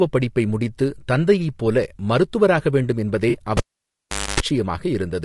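All the way through, the speech has a rough, grainy texture, with noise filling the gaps between harmonics and a thin, slightly synthetic top end. That's likely low-delay AAC compression, with AAC-ELD's short frames squeezed at something like 32 kbps.

At 3.29 s there's a brief smeared, noisy patch that runs to about 3.37 s. That's AAC frame loss with concealment: roughly 40 ms of data went missing, which fits a couple of dropped frames, and the decoder papered over the gap by reusing the last good spectrum.

Just after, at 3.57 s, a pop marks the cable being pulled and plugged in. The sound drops to near silence for about 780 ms, including a burst of 50 Hz mains buzz lasting about 260 ms while the plug only half touches. A second pop at 4.40 s brings the sound back.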